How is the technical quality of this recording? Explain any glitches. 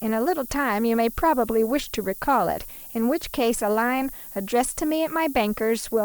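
The quality is poor, with one fault present for the whole clip. Low bit depth with noise shaping: the speech is stored with only 7 bits, and the rounding error is fed back so it is pushed toward high frequencies. The result is a constant thin hiss, only around 15 dB below the signal, that grows sharply brighter toward the top of the band.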